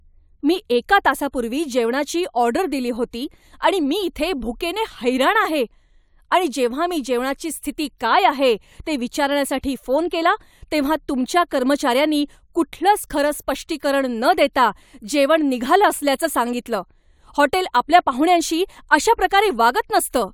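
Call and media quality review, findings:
No call or media quality findings to report for this speech recording.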